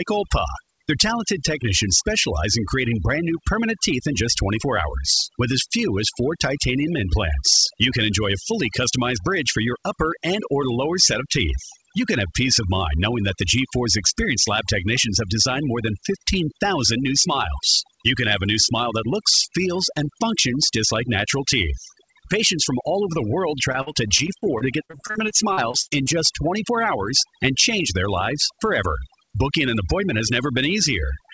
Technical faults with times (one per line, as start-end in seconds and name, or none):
0.00-31.33 overdone noise removal
23.72-26.08 repeated packet loss (robotic sound)